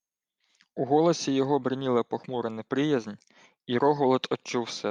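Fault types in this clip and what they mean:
Nothing here to flag; I listened for glitches and problems in the signal chain and didn't hear any.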